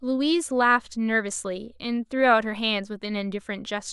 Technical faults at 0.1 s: none

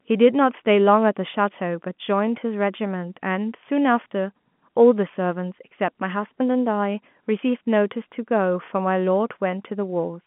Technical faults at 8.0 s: none

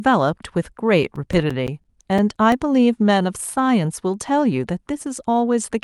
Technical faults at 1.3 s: CD scratch ticks

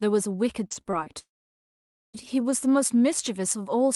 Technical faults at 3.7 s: none

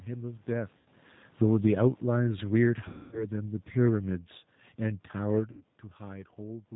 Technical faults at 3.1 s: G.729 codec; automatic gain falling; VoIP packet loss concealed by the speech codec

